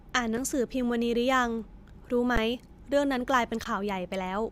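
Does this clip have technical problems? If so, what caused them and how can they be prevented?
Yes, this speech clip has two kinds of fault.

Three underruns with held sample occur at 0.37 s, 2.36 s and 3.64 s, lasting 5 ms, 12 ms and 18 ms. Each time the playback buffer ran dry and the converter froze on its last value, so the waveform goes flat. Unlike a dropout to zero, the stop itself barely clicks. Meanwhile a few milliseconds of live sound (roughly 5, 15 and 20 ms) went missing. Larger output buffers or higher-priority audio threads would prevent this.

Compressed frames skipped at 2.53 to 2.55 s. About one frame was never decoded, and the jump matches a frame of about 23 ms, so roughly 20 ms of speech vanishes. Protecting the file or stream against corruption and loss would prevent it.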